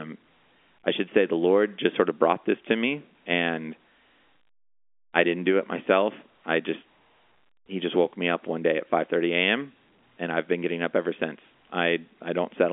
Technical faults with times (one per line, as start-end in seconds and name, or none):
none